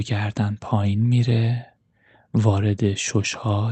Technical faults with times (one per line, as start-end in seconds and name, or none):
none